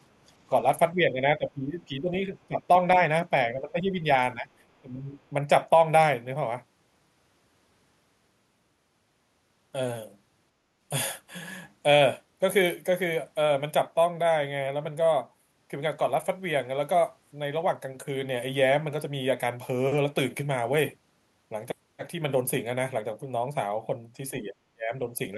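Speech suppressed in double talk at 0.93–2.62, 2.88–3.09, 3.54–4.06, 4.34–4.51, 4.82–5.17, 24.31–24.55 and 24.74–25.01 s: the voice dips by roughly 5 to 20 dB, once near 30 dB, likely because an echo canceller could not separate the speech from the overlapping far-end echo and turned both down.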